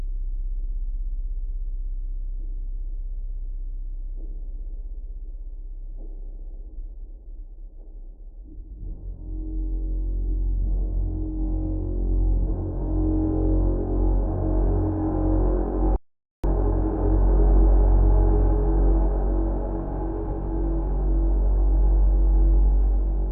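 An audio dropout to silence runs from 15.96 to 16.44 s: the sound cuts off mid-flow and returns after about 0.48 s of complete silence with no room tone. The input was likely lost through a disconnected device, failed link or stray mute while recording continued, so that stretch is gone.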